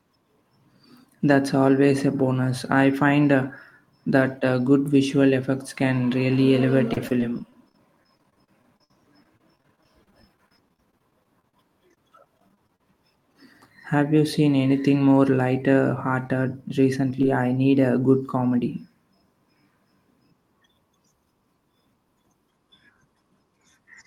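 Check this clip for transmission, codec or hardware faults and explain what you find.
Two kinds of transmission fault are present, both from lost audio packets that the receiver concealed.

Repeated packet loss (robotic sound) runs from 6.93 to 12.81 s. Dozens of short gaps, the longest 58 ms, arrive one after another, and about 16% of that stretch is synthesized fill. Each gap is patched by extending the preceding sound, and the next one comes before the speech recovers. The result is a choppy, robotic texture with pieces missing. Its length and density set it apart from isolated dropouts.

Short concealed packet loss appears five times. The first two fall at 16.24–16.26 s and 16.28–16.30 s, just after "seen anything more lighter". The others are at 17.10 s, 17.15–17.19 s and 17.22 s, the last just before "I need a good". Each hole is only 10 to 20 ms long. The decoder bridges it by continuing the previous pitch or noise and then blends back into the real signal. 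What you hear is a brief smear or wobble, and a consonant may drop out. These are single events, not a sustained robotic stretch.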